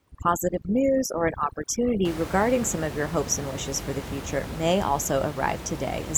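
From the start to 2.05 s, overdone noise removal is at work: a noise reduction stage set far too aggressively pulls individual frequency bands down or shuts them off whenever their level sits close to its noise estimate, and the quieter components of the speech are caught along with the room noise, which elsewhere sits about 10 dB below the speech. The background drops and breaks up into twinkling specks.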